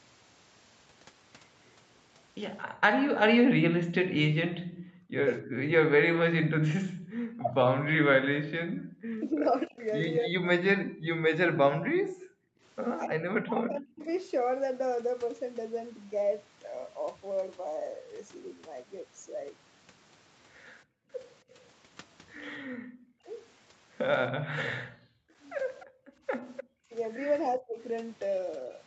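From 2.66 to 7.1 s the room background is gated by the echo canceller. In brief dips totalling under a second, it falls about 40 dB while the far side plays, then returns. Overlapping this, from 2.97 to 14.08 s the speech is suppressed in double talk, likely because the canceller could not separate the talker from loudspeaker echo. Roughly 3 s of the voice dips by up to around 40 dB, thins or breaks into pieces. Unlike the gating, the voice itself is lost, not just the room tone. Background gating recurs from 11.61 to 12.61 s, about 40 dB down for under half a second. At 13.98 to 14.12 s a faint echo leak appears, about 35 dB below the speech and delayed by 276 ms, likely from residual loudspeaker pickup. It is a separate delayed copy rather than a gap. A short gate drops the background about 36 dB between 20.85 and 21.1 s. From 22.58 to 28.69 s double-talk suppression returns, suppressing roughly a second of speech. 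Within it, from 25.8 to 26.64 s, a clearer echo leak sits about 15 dB below the voice at a 297 ms delay. The background gates out about 40 dB from 25.86 to 26.26 s. Throughout, the call path's Opus coding tops out at 8 kHz.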